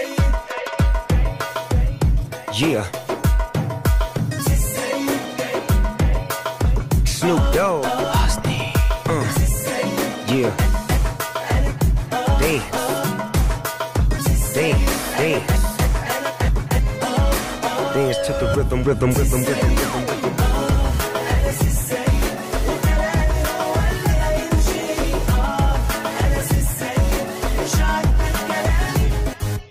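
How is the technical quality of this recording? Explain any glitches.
One glitch stands out: a call bitrate drop from 20.24 to 21.75 s. The call's bandwidth estimate fell and the encoder was forced to spend far fewer bits, which fits a fall from roughly 64 to 27 kbps. It coded the audio more coarsely, so for about 1.44 s the sound turns rough before recovering.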